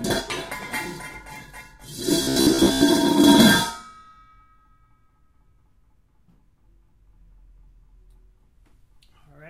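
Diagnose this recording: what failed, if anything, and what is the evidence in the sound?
From 2.23 to 2.84 s the sound turns into a rigid, metallic buzz at 66.8 Hz, with most of that stretch made up of repeats: robotic sound from repeated short buffers. The buffer stage likely starved, looping the last 15 ms of audio while fresh material went missing.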